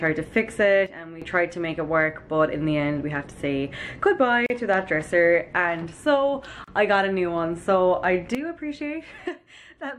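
Sudden gain jump at 0.86 s: the level of the sound and its background noise drops together by about 11 dB in a single step, with no fade, and snaps back at 1.22 s. This is likely a gain setting applied from one sample to the next without a ramp.

Gap at a join of encoded pieces at 4.46 s: a 37 ms silence cuts into the continuous sound, its edges slightly softened, and the sound resumes exactly where it stopped. Separately encoded segments were spliced without trimming the encoder's start delay and end padding.

Gap at a join of encoded pieces at 6.64 s: a second silence, 34 ms long, appears at another untrimmed splice between encoded segments, with the same abrupt but slightly smeared edges and no content missing.

Sudden gain jump at 8.35 s: sound and noise floor fall together by about 12 dB in one instant and stay at that lower level to the end. A likely cause is an unramped gain step or bit shift.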